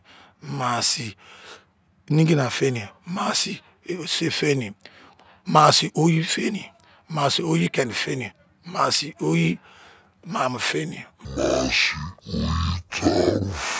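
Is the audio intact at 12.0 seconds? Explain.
No. A wrong sample rate fault runs from 11.25 to 13.79 s. The speech plays at half speed, an octave low, which fits 32 kHz audio played at 16 kHz.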